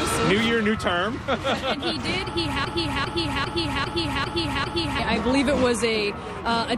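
From 2.65 to 4.99 s, a broken-record loop: one 0.40 s fragment stutters six times, likely a stalled stream, showing identical back-to-back waveform blocks.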